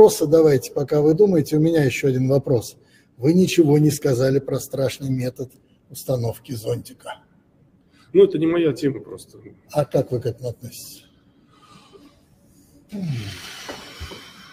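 No technical faults detected.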